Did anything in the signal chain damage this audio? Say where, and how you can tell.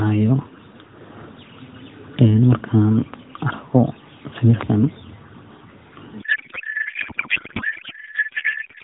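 Yes. A codec payload misread begins at 6.22 s and lasts to the end. The speech turns into garbled noise and warble that barely tracks it. At the codec stage, the AMR-NB decoder is unpacking fields from the wrong positions, which fits octet-aligned frames read as bandwidth-efficient.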